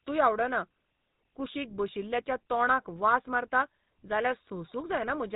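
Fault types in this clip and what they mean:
GSM full-rate codec: The whole speech clip runs through the original GSM phone codec. It models the vocal tract as a filter and drives it with a sparse train of regular pulses, keeping only one excitation sample in three. Nothing above 4 kHz survives, so the sound is narrow and dull. The damage is plainly audible as a buzzy, gravelly roughness. The coarseness fits a rate of about 13 kbps.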